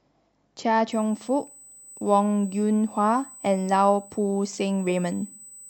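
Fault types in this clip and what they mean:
USB whine: a thin, steady whistle at 8 kHz enters at about 0.92 s and holds its fixed pitch to the end, sitting roughly 25 dB under the speech. The 125-microsecond microframe rhythm of USB bus current is leaking into the audio through the power or ground path.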